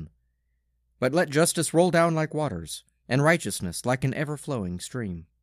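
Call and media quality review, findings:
No findings for this call and media quality review.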